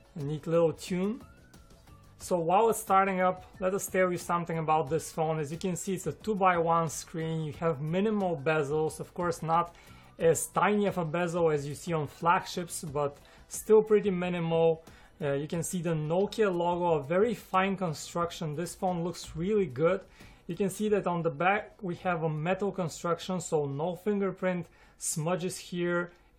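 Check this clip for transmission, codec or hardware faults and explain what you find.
No transmission, codec or hardware faults turned up in this clip.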